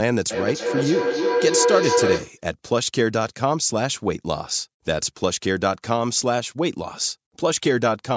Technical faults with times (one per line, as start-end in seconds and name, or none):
0.30-2.43 feedback howl